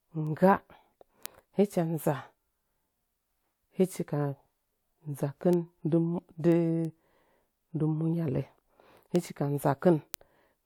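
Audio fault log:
0.27–10.47 s, word clock ticks: sharp ticks about every 0.3 s, around 30 in all. The receiver's unlocked clock drifts roughly 70 ppm, slipping one sample each time.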